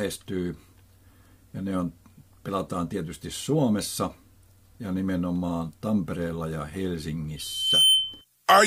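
From 7.36 s to 8.25 s, a loudspeaker feedback squeal takes over. A single tone near 3.1 kHz appears and swells over roughly half a second. It ends up around 10 dB louder than the rest of the sound. The microphone is hearing the loudspeaker it drives. At that one frequency the loop gain has passed unity. Each trip round the loop makes the tone stronger, so it grows by itself into a piercing whistle.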